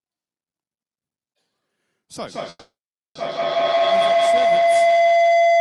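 Feedback howl from 2.13 s to the end of this speech clip: sound loops between two devices sharing a room, gaining level each pass until a tone near 700 Hz rises to about 14 dB above the speech, with the loop repeating roughly every 150 ms. Call audio freeze at 2.49–3.17 s: the audio stalls for about 660 ms, mostly silence for 500 ms, then resumes where it stopped with nothing lost, likely because delayed packets emptied the jitter buffer.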